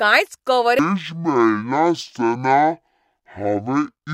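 A speech recording that, from 0.79 s to the end, suffers stereo read as mono: the left and right samples are being taken in turn as one channel, so each stereo frame becomes two consecutive mono samples. The sound therefore runs at half speed and drops a full octave (12 semitones), and the alternating channel samples fold a fainter mirrored copy of the sound into the upper half of the spectrum.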